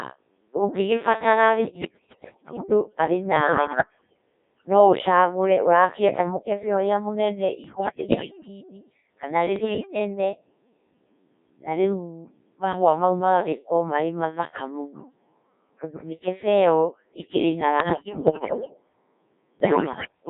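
Throughout, the speech carries the signature of the Codec 2 vocoder: a steady robotic, buzzy timbre confined to roughly 150 Hz to 3.7 kHz, with heavy damage consistent with a very low-rate mode around 1.3 kbit/s. The voice is rebuilt from sine waves driven by pitch, voicing and envelope parameters rather than the original waveform. Unlike ordinary lossy compression, the harshness is a constant synthetic quality, not smearing or pre-echo.

Over that, bursts of bit errors on digital voice radio break in at 1.61–2.64 s, 3.36–4.21 s, 7.64–8.48 s, 9.56–9.99 s, 17.80–18.74 s and 19.60–20.12 s. Corrupted bits scramble the per-frame pitch, level and spectral parameters, so the voice lurches into bleeps, warbles and gibberish, roughly one bit in ten wrong, worse in the 7.6 s and 17.8 s bursts. Packet loss would leave gaps or repeats, but here the audio keeps going as garbled synthesis.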